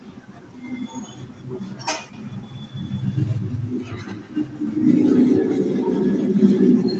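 Speech with a feedback echo between two devices from 2.13 s to the end: a second device replays the audio into the microphone, so each syllable returns about every 150 ms at about -15 dB. A spectrogram shows faint, evenly spaced copies trailing each syllable.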